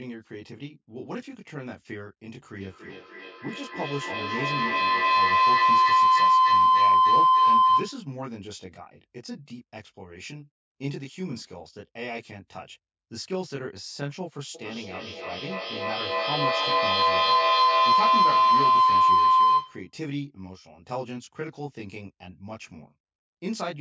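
All the way through, there's a channel delay (comb filtering) going on. One side lands roughly 20 ms behind the other, and when the two fold down to mono, whatever they share cancels at a run of evenly spaced frequencies, starting down around 20 Hz. Notches packed that tightly give the speech a rough, slightly doubled quality that never goes away.

At 2.57 s a feedback howl kicks in. It sounds like two devices on the same call in one room, with mic-to-speaker-and-back gaining level on each lap. It narrows to a tone around 1 kHz, pulses about every 300 ms as it circles the loop, and peaks at about 14 dB over the speech before it's cut at 8.14 s. It happens again from 14.55 s to 19.94 s, with the same pitch, pulse and peak. The call's mic processing keeps everything below 8 kHz, so the howl sits well inside the band.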